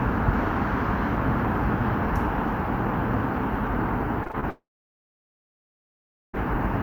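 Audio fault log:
4.23–4.44 s, repeated packet loss (robotic sound): five short holes, the longest 20 ms and about 80 ms in all, are each patched by repeating the sound just before, so 43% of this span is stand-in audio. It sounds choppy, with pieces missing. The waveform shows copied slices, and the spectrogram shows smeared, repeating columns.
4.50–6.35 s, long network dropout: the sound turns into a brief fading buzz, then about 1.7 s of silence follows. The likely cause is the stream ceasing to arrive for about 1.84 s. The spectrogram shows a smear decaying into a blank band, and the waveform flatlines until the sound resumes without the lost part.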